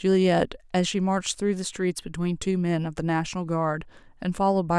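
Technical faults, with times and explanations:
No technical faults can be heard in this speech recording, and the signal arrives intact with nothing in it that points to a problem in the recording or playback chain.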